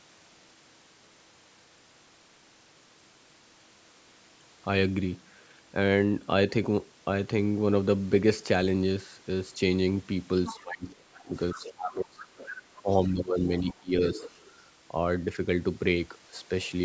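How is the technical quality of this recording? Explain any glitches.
The recording has echo problems from about 10.5 to 14.5 s, where both sides of the call overlap.

Other side's voice leaking through, at 10.46–10.58, 11.14–11.21, 11.52–11.73, 12.2–12.8, 13.71–13.82 and 14.15–14.52 s: faint second-voice scraps, about 15 to 30 dB under the speech, likely loudspeaker echo the canceller missed. A spectrogram shows weak, separate harmonic traces.

Speech suppressed in double talk, 10.5–12.32 s and 12.81–14.23 s: the talker dips by up to roughly 25 dB and then roughly 15 dB, likely the canceller turning both voices down. The waveform shows gouged, uneven envelope.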